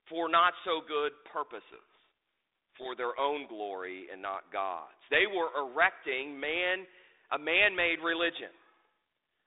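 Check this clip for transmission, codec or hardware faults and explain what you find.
One fault turns up: a codec payload misread from 1.72 to 2.89 s, just after "for not so good" and ending before "their own glory and". The two ends disagree on the bit order inside each G.726 code word, so the decoder rebuilds the wrong differences and the speech sinks under harsh, rasping distortion until the packing lines up again.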